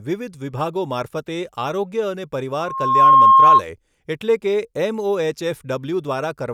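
From 2.56 s to 3.62 s the speech is overtaken by loudspeaker feedback squeal, ending just before "એટલે કે". The microphone is re-capturing its own loudspeaker, and at 1.1 kHz the loop gain passes one, so that tone feeds on itself and swells over roughly half a second to sit around 15 dB above the speech. On a spectrogram it appears as a single bright horizontal line at 1.1 kHz; the waveform's envelope balloons into a dense, steady block.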